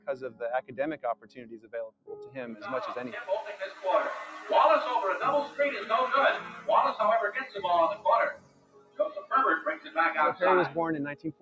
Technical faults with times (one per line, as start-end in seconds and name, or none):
0.00-11.41 noise suppressor applied to music or sounds
0.00-2.36 sound cut by the noise suppressor
6.47-6.68 sound cut by the noise suppressor
8.32-9.33 sound cut by the noise suppressor
9.76-9.97 sound cut by the noise suppressor
11.14-11.41 sound cut by the noise suppressor